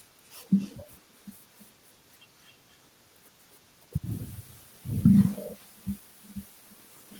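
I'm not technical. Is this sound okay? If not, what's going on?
No. There's an echo leak: a faint, delayed copy of the speech trails it by about a quarter second, at 0.23–1.23, 1.59–1.66, 4.18–5.91 and 6.22 s to the end. Unlike room reverberation, it's a separate repeat, likely from a loudspeaker's sound getting back into the microphone.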